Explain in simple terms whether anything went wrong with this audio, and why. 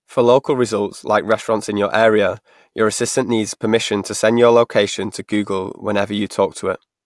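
Nothing went wrong; no faults can be heard.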